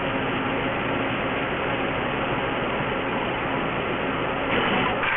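Aliasing runs throughout. The audio points to resampling near 6 kHz without filtering, so content folds back below 3 kHz with gritty, metallic tones almost as loud as the sound itself. A spectrogram shows energy packed hard up to a sharp 3 kHz edge.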